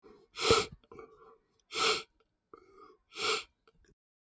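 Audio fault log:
Throughout: noise suppressor applied to music or sounds. A suppressor tuned for speech stays active across the whole clip and treats held or steady parts of the sound as noise, so the level swings by about 10 dB as its gain rises and falls. Onsets get through while sustained portions sag, which gives a pumping, thinned quality. On a waveform the envelope breathes unevenly. A spectrogram shows patchy, flickering energy in steady regions, and the call microphone processing leaves nothing above 8 kHz.
0.03–0.35 s, 0.77–1.71 s, 3.49–3.93 s: sound cut by the noise suppressor. In each span the suppressor pushes the sound down harder than elsewhere, by about 13 dB, about 16 dB and about 15 dB at the deepest points. The first dip is brief, roughly 150 ms. The middle one covers most of its second-long window. The last lasts around a third of a second. Decays and sustained parts shrink abruptly while sharp transients survive. 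On a waveform these appear as sudden hollows after attacks. On a spectrogram, tails end early and fade into dark gaps.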